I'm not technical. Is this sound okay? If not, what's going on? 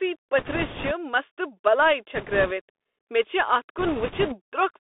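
No. The speech went through a Bluetooth CVSD headset codec, the basic voice format older headsets use. It records sound as a rapid stream of simple up-or-down steps and keeps only a narrow telephone band, roughly 300 Hz to 3.6 kHz. Throughout the clip, the speech therefore sounds thin and boxy, with a grainy hiss underneath. S sounds come out scratchy, and loud, bright moments smear because the steps can't keep up.

There are also bit errors on a Bluetooth voice link at 0.38 to 0.91 s, 2.15 to 2.52 s and 3.78 to 4.37 s. During these stretches the wireless signal was corrupting around one bit in twenty to twenty-five. Each bit is only a tiny step, so the errors don't cause sharp clicks. Instead, the speech gets a rushing, crackly noise laid over it for those moments, heaviest in the first and last stretches.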